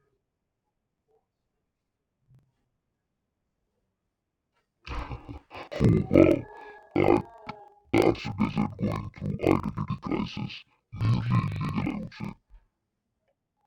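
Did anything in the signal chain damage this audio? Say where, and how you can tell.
Yes. Interleaved audio read as planar runs through the whole speech clip, a fault at the driver or buffer stage where sample layout is handled. The speech sounds an octave low, doubled and choppy, with a flutter at about 23.4 Hz. Each 42.7 ms block, which fits a 2048-sample buffer, carries alternating left and right samples, but its first half is taken as left and its second half as right. Both halves then play together at half speed, dropping the pitch 12 semitones while the overall pace stays correct.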